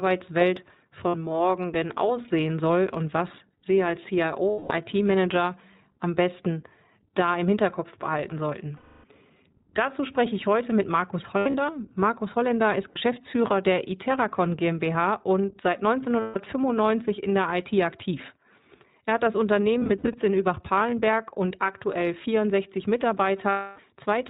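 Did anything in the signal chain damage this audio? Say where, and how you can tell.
Yes. At the codec stage, the whole clip is iLBC-coded speech: nothing above 4 kHz, and the rough, faintly synthetic texture is plainly audible throughout. The character fits the 15.2 kbps mode with 20 ms frames, where each frame's excitation is coded independently.

At the network stage, lost iLBC frames cause dropouts at 1.08–1.16 s (just before "morgen denn aussehen soll"), 4.51–4.72 s, 8.76–9.05 s (after "behalten sollten"), 11.38–11.56 s, 12.90–12.98 s, 16.20–16.37 s, 19.78–20.16 s (after "hat das") and 23.50–23.80 s. Each gap sounds like a held, buzzy vowel because the decoder repeats the last pitch cycle mixed with noise, fading it over the 200–280 ms losses. The ones at 11.38 s and 19.78 s are scattered, with runs of roughly 70 ms. Recovery after each gap is immediate, because iLBC frames stand alone.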